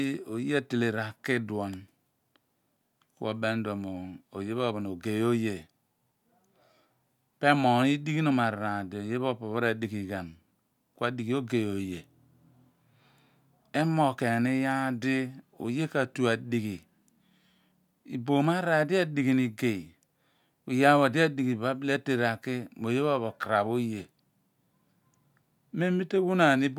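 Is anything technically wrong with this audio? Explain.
No, nothing technically wrong.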